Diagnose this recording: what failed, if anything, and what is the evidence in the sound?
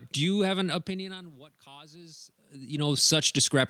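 The automatic gain rising is in call processing. Right after "do you have", around 0.66 s, the input drops by about 24 dB, and from there to the end the voice and room noise swell together as the AGC slowly pushes its gain back up.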